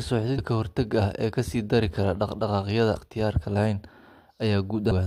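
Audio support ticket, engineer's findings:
Damaged data in a compressed stream: short glitches at 0.37 s, 2.95 s and 4.90 to 4.93 s in speech. Decoder misreads corrupted frames, loses sync and resyncs. Spectrogram: thin broadband vertical streaks. Waveform: brief spiky discontinuities.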